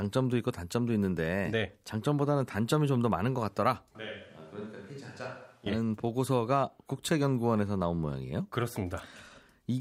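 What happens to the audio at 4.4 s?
At 4.4 s the speech sits inside a switch to a distant microphone, running from 3.95 to 5.66 s: it turns suddenly roomy and hollow, thinner in the bass, about 10 dB quieter, with room noise rising. The abrupt switch at both ends, rather than a gradual fade, points to a likely failed close microphone.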